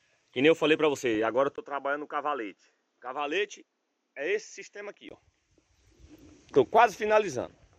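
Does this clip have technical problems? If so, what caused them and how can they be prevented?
Yes, three things stand out.

The whole clip sounds dull, with a gurgly, granular edge and upper bands that flicker in and out. That's plainly audible MP2 compression, likely from a low bitrate, consistent with roughly 80 kbps, where Layer II starts dropping whole sub-bands and coarsely quantising the rest. Give it more bits, say 160 kbps or higher, or use a more efficient codec.

At 1.15 s there's a brief burst of DAB burbling. Bit errors slipped past error correction into the MP2 stream, so wrong samples put short blips of noise into single sub-bands over what sounds like a handful of frames, from a small fraction of a percent of bits going wrong. Better reception or a stronger signal path prevents it.

From 1.56 s to 5.11 s the sound goes duller and boxier, with nothing above 7.6 kHz, a level drop of about 5 dB, a new noise floor well below the signal and a 20 ms gap at the switch. 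That's most likely an input switched to a poorer device mid-recording. Lock the input device before you hit record.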